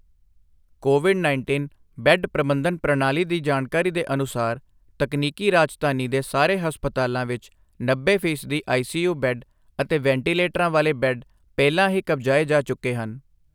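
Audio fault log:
No faults are audible in this speech recording.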